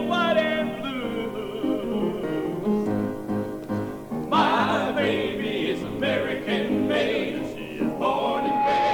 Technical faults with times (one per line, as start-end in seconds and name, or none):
7.88-8.93 loudspeaker feedback squeal